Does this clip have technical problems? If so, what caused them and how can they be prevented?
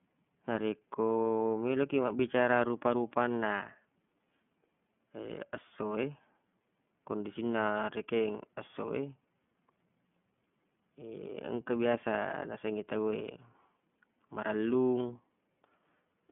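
Yes. The speech passes through the iLBC codec throughout, so nothing outside roughly 150 Hz to 3.4 kHz survives. Each 30 ms frame's excitation is coded independently, which leaves a plainly rough, synthetic texture that fits the 13.33 kbps mode. To prevent this, record or transmit with a wideband codec such as Opus at an adequate bitrate.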